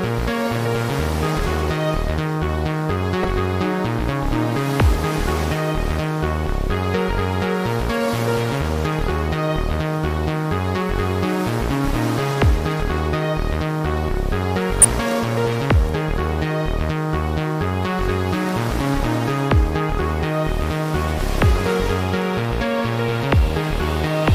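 At 3.23 s and again from 14.81 to 14.85 s, damaged data in the compressed stream breaks the decoder's sync, producing brief blips.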